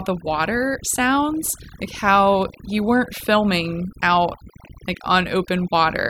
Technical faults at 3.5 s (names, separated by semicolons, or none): overdone noise removal